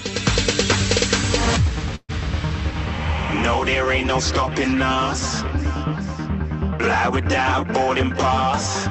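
The audio, carried over a call path whose codec limits it to about 8 kHz, has a call audio freeze from 1.95 to 2.11 s. For roughly 0.13 s the last sound is stretched into a fading buzz or hiss, which then drops to about 30 ms of silence before normal audio resumes. The likely cause is delayed packets draining the jitter buffer. Nothing appears lost: playback continues where it stopped, now about 134 ms later than before.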